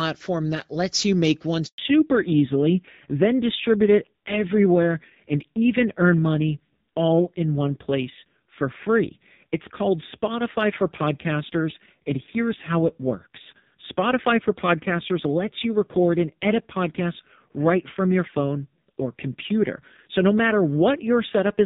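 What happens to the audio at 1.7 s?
Right after "lets you make one", a handover gap runs from 1.66 to 1.78 s. While the call switches networks, no speech frames arrive, so the sound fades out within a few tens of milliseconds and stays silent for 120 ms until the new link delivers audio again.

From 1.78 s to the end, the call stays in fallback to narrowband. Before the gap, the AMR wideband (HD Voice) codec carries clear speech. After it, nothing above 4 kHz remains, and the speech sounds duller and rougher, which fits a low-rate narrowband codec mode.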